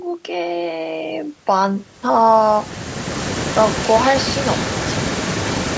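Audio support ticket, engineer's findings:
Echo leak, 3.44–4.0 s and 4.2–5.77 s. Likely far-end loudspeaker path with incomplete echo cancellation, residual returned. Heard as a delayed copy of the speech about 0.46 s behind, roughly 15 dB below the direct signal, present for both stretches.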